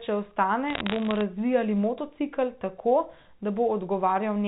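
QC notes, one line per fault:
0.68–1.21 s, bit errors on a digital phone line: a burst of sharp ticks and gritty crackle scattered over the speech, which itself keeps its level and tone underneath. Over this half second, roughly one bit in a few hundred arrived flipped on the 64 kbps G.711 mu-law line. Each flipped bit corrupts a single 8-bit sample, and when it strikes the sign or a high-order bit that sample jumps far from its neighbours, producing an isolated click.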